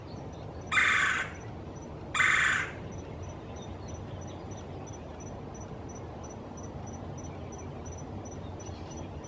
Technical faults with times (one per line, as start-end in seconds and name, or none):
none